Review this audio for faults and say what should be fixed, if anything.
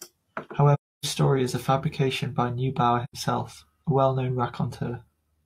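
AAC frame loss with muting leaves two soft-edged silent gaps in the speech, from 0.74 to 1.06 s and from 3.03 to 3.13 s. The first fits about seven lost frames and the second about two. The decoder zeroed the spectrum for those frames, and the overlapping windows fade the sound out and back in rather than cutting it. On a spectrogram each shows as a blank vertical band with tapered edges, and the waveform thins to a flat line between short ramps. To prevent it, protect the AAC stream against frame loss with forward error correction or retransmission, or use a decoder that conceals lost frames instead of muting them.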